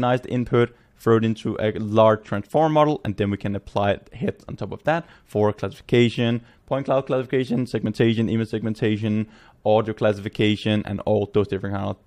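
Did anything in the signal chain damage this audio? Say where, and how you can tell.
No, nothing along the chain audibly damages this audio, and there is no stage to point to.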